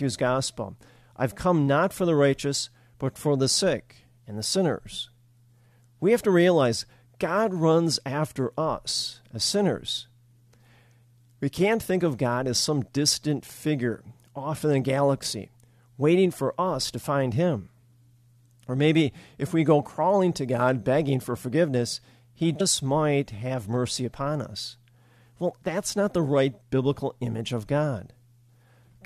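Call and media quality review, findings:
Damaged data in compressed stream at 22.60 s. Brief glitch in the speech. Probable component: decoder input. Corrupted bytes make the frame unreadable, so the decoder loses sync and jumps to the next valid frame header.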